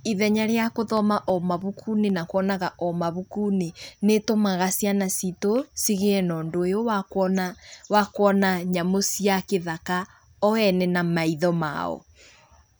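From 0.97 to 2.10 s the speech carries CD scratch ticks: eight short clicks spaced evenly, about seven a second, each lasting no more than a few milliseconds. A blemish on the disc destroyed more data than error correction could rebuild on each rotation, so the player patched or muted those samples. The result is a regular ticking under the speech. On a spectrogram the ticks show as thin vertical broadband lines; the waveform shows tiny notches or flattened spots.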